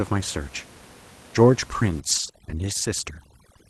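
From 2.0 s to the end of the clip, overdone noise removal takes hold. The suppressor is pushing individual frequency bands far down, or off entirely, wherever they sit close to its noise estimate. With room noise only about 23 dB below the speech, the quieter parts of the speech fall into that range and are cut along with the noise. The background drops and breaks up into twinkling specks.

Between 2.11 s and 2.29 s comes a lost packet rebuilt from error correction. The audio is continuous, with no gap, but about 100 ms of it sounds rougher and noisier. That pattern points to several lost packets, each replaced by the low-bitrate copy that Opus carries inside the following packet. The call path is band-limited to about 12 kHz, so these frames are coarser in texture but show no separate drop in the top frequencies.

At 2.31 s to 2.35 s there is a short concealed packet loss. About 20 ms of audio arrived too late for the decoder. 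The receiver filled the hole by extending the preceding sound, either continuing its pitch or generating shaped noise, and then blended back into the real signal. The result is a brief smear or wobble right after the rebuilt stretch.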